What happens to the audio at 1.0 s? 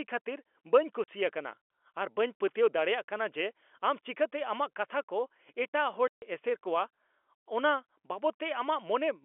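The speech drops out abruptly from 1.04 to 1.08 s, right after "ᱠᱷᱟᱹᱛᱤᱨ ᱵᱟᱹᱧ" and before "ᱟᱠᱟᱱᱟ ᱟᱨ ᱵᱟᱹᱧ ᱯᱟᱹᱛᱭᱟᱹᱣ". A 40 ms hole of dead silence with hard edges. This is packet loss filled with silence: packets of the narrowband telephone-coded stream never arrived, and the receiver simply played nothing in their place. The 40 ms gap fits two consecutive 20 ms packets.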